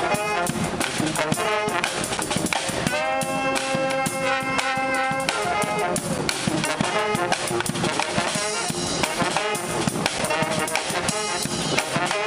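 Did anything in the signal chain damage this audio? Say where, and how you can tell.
Yes. Chunked storage or playback left a gap between chunks, with 7 ms silences at 2.17, 6.18 and 10.19 s, repeating every 4.0 s.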